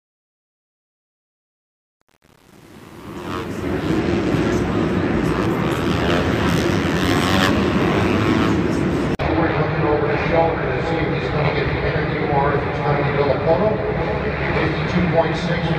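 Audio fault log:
0.00–3.99 s, truncation distortion on a fade: the fade-in was carried out at only 8-bit precision with no dither, so the gain stage snapped each sample to a handful of coarse steps. Through the quiet start, worst from 0.00 to 3.82 s, the waveform collapses into small square steps, and the sound comes in gritty rather than rising cleanly. By 3.99 s the fade reaches full level and the grit clears.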